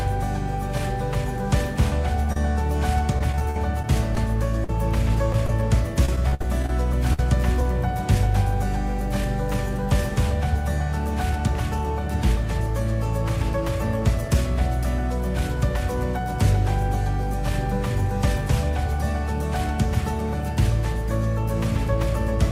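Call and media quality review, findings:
Brief smear at 2.32 s, about 30 ms of audio missing and patched over. Short concealed packet loss: the receiver's jitter buffer or decoder extended the preceding sound, then crossfaded back into real audio.

Choppy, robotic sound from 3.08 to 4.69 s and again from 5.32 to 7.19 s. Repeated packet loss: successive concealed gaps, the longest about 51 ms and 59 ms, patching about 10% and 13% of the stretches.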